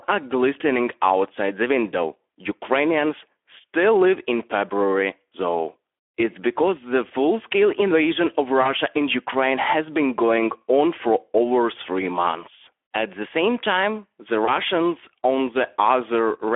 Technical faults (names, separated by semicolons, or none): Speex codec; VoIP packet loss concealed by the speech codec